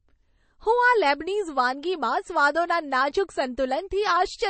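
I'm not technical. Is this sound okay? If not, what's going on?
No. MP3 compression runs through the whole clip: nothing above about 8.3 kHz survives, so the speech sounds dull, and faint details flicker in and out, giving a watery, swirly edge and metallic chirps on s sounds. This is likely from squeezing the file too small.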